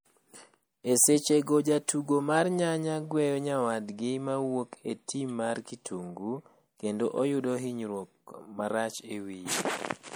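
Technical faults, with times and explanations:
Throughout: MP3 compression. The likely cause is an MP3 encoder starved of bits, at a rate that fits around 64 kbps. It zeroes weaker frequency lines that then flicker on and off between frames. The damage is plainly audible in the speech as a watery, swirling texture, with metallic chirps on s sounds and softened, smeared consonant attacks. The top end still extends to about 20.9 kHz before the treble stops.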